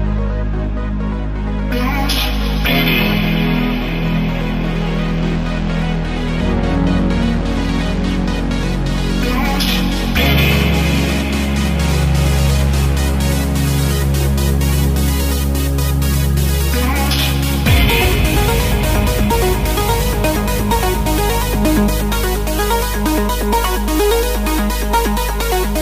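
No technical faults can be heard anywhere in the recording. No dropout, glitch or distortion interrupts the sound at any point.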